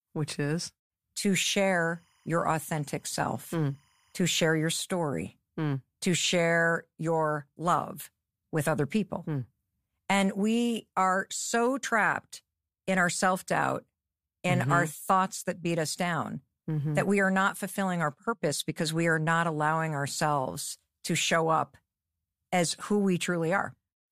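From 1.44 to 4.83 s, timecode bleed leaks a faint chirping warble, around 40 dB down, behind the speech; unlike a steady whine, it flips between roughly 1 and 2 kHz, fitting 25-frame code.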